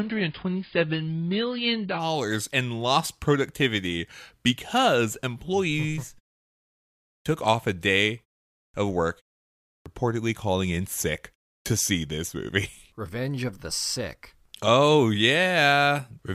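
For the first 2.0 s the player is on an adaptive stream starting at a low bitrate, which fits a very thin AAC version near 16 kbit/s. The speech sounds dull and smeared, with nothing above 5.1 kHz, until the quality suddenly improves with no gap.

Later the output device drops into sleep during silences and needs time to wake, causing a clipped start after a pause at 7.22 s, 8.7 s, 9.82 s and 11.62 s. About 36 to 42 ms of each onset is lost, so words begin abruptly, even where the muted pauses preceding them last only 0.35 s.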